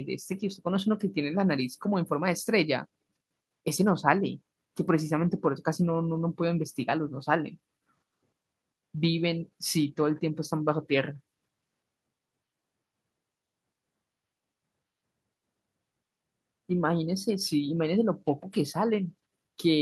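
Listening through the speech recording, nothing stood out as a technical problem at any point.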